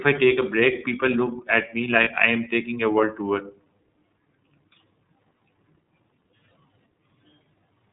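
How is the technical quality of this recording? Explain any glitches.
The recording is limited by narrowband codec coding throughout, with one brief dropout.

iLBC codec, the whole clip: the sound is squeezed through a narrowband VoIP codec that codes each frame's excitation independently. Nothing above 4 kHz survives, so the speech is dull and plainly rough and synthetic. The character suggests iLBC's 30 ms frame mode at around 13.3 kbps.

Lost iLBC frames, 2.04 to 2.08 s, just after "look at me": packet data went missing, and the decoder filled the gap by repeating the last pitch cycle mixed with noise. It sounds like a short held, faintly buzzy vowel, consistent with one lost 30 ms frame. The voice returns almost immediately.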